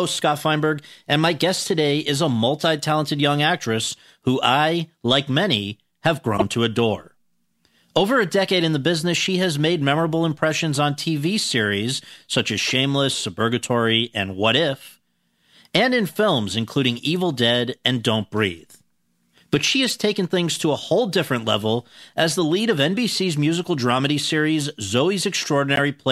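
Corrupt frame decoded, three times: the decoder received compressed frames with flipped bits and played them anyway, so misread gains and codes put energy at the wrong frequencies. Each event is a short squeaky burst cutting across the speech: 6.36 to 6.42 s, peaking around -5 dBFS; 19.83 to 19.90 s, around -10 dBFS; and 25.76 to 25.79 s, around -5 dBFS. Each lasts only tens of milliseconds, which fits a handful of damaged frames.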